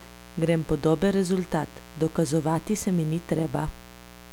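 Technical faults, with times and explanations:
Throughout, mains buzz: a steady, raspy buzz sits roughly 20 dB under the speech. Sharp switching spikes at twice every 60 Hz cycle carry a long series of 60 Hz harmonics into the kilohertz range, giving that edge rather than a smooth hum.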